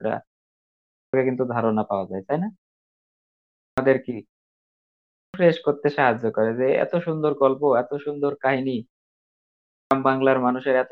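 Clipped start after a pause at 0.57, 3.18, 4.72 and 9.37 s: the output device drops into sleep during each silence and needs over half a second to wake, so roughly 0.54 to 0.62 s of speech vanishes and sound resumes abruptly, missing its onset.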